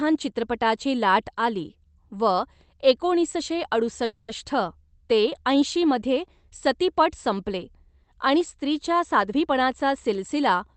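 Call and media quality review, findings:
Call audio freeze, 4.05–4.30 s: sound stalls, last segment stretched into fading buzz for about 230 ms. Likely jitter buffer underrun from delayed packets; playback resumes where it stopped, nothing lost, delay now about 230 ms longer.

Jitter buffer speed-up, 9.04–9.48 s: speech hurried, around 112% speed, pitch unchanged. Receiver trimming pitch-period slices, roughly 70 ms total, to drain excess buffered audio and cut latency. Opus path band-limited near 8 kHz.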